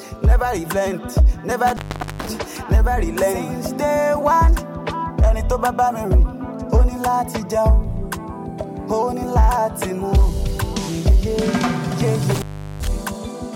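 Intermittent contact at 1.67 to 2.29 s and again at 12.35 to 12.88 s: a loose cable or plug briefly opens, so the sound drops out for roughly 430 ms and 380 ms, with crackle at each break and re-make and faint hiss during the gaps.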